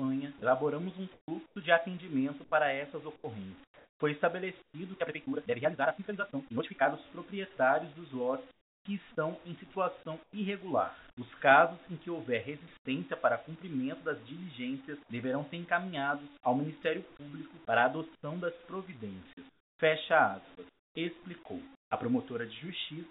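A stretch of audio carried over a call link whose narrow band, with nothing above 4 kHz, fits G.711 A-law at 64 kbps, and it shows three kinds of fault. From 0.4 to 4.74 s the sound is chopped by the voice detector. Roughly 0.9 s in total of quiet onsets and tails drops out and is filled with flat synthetic hiss. The sender's detector was likely toggling transmission on and off. Unlike a clean comfort-noise gap, the cuts here fall inside active sound and clip its edges. From 4.98 to 6.86 s there is a time-stretched section. The audio runs at about 1.96 times its normal pace with the pitch unchanged, so it sounds rushed, with short pieces dropped, likely by a time-scaling step fitting the audio to a shorter length. That keeps it distinct from a sped-up playback, which would also raise the pitch. Comfort noise in place of the background appears at 8.51 to 8.85 s, 10.23 to 10.33 s, and 12.77 to 12.85 s. 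In each, the real background, about 28 dB below the loudest parts, gives way to steady featureless noise about 22, 12 and 20 dB quieter respectively, likely from discontinuous transmission during pauses. Between 18.15 and 21.91 s about 0.8 s more of background is swapped the same way. These sit in pauses.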